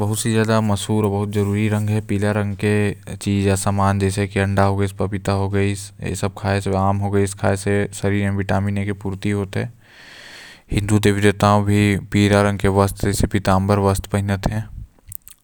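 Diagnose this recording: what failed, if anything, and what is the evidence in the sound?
Nothing failed; no fault is audible anywhere in this speech.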